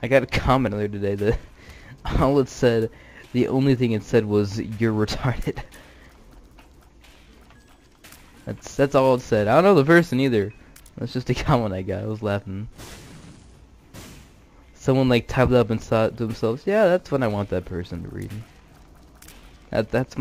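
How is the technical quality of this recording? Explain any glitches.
No glitches can be heard in this recording, and nothing in it points to a technical fault. There are no dropouts, clicks, jumps or breaks anywhere in the audio.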